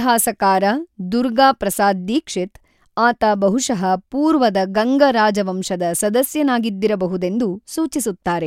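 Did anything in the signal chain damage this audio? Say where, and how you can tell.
No, nothing in the chain audibly damaged this speech recording, and no stage shows any sign of trouble.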